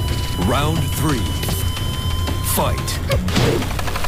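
At 1.44 s there's a quick scramble that lasts until about 1.53 s. That's chunks out of order: one roughly 46 ms block turns up a chunk late and plays after its neighbour. Nothing goes missing, but the sound jumbles briefly across three hard joins.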